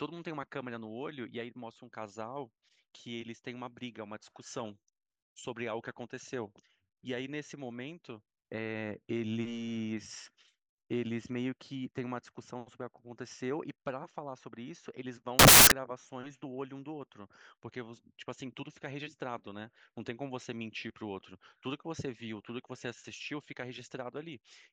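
From 15.39 to 15.72 s the speech turns into loud, harsh broadband noise. These are samples built from the wrong bytes: low bits misread as high ones.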